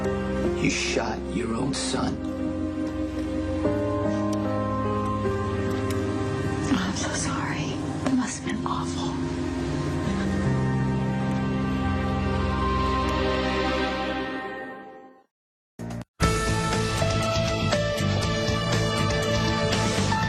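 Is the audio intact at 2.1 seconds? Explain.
Yes, the audio is intact at 2.1 seconds, with no dropout, click, distortion or other fault audible at that moment.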